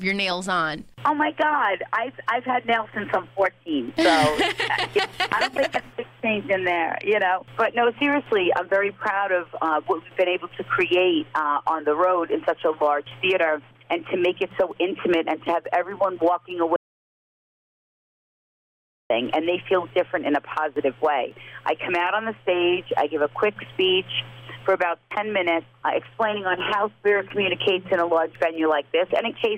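An audio dropout to silence runs from 16.76 to 19.10 s, about 2.3 s of dead silence with no room tone, likely from lost input. It appears as a flat waveform line and a blank spectrogram band.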